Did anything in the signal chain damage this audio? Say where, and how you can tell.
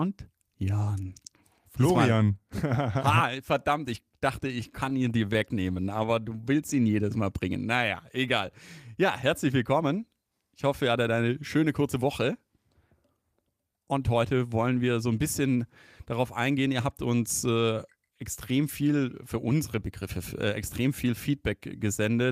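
Yes. The network path starved the jitter buffer with repeated stalls (stutter) from 4.09 to 6.1 s, right after "verdammt ich". Seventeen times the receiver stretched the last sound over a gap of up to 30 ms, about 208 ms in all, so the speech drags and stutters, though nothing is lost.

The same buffer later performed a jitter buffer speed-up to shed excess delay: from 16.37 to 16.81 s, between "so ein bisschen darauf" and "habt uns äh extrem", at 107% speed, and from 20.49 to 21.81 s at 104%. Each trimmed about 40 to 50 ms of pitch-period slices, so the first stretch sounds hurried, and both keep their pitch.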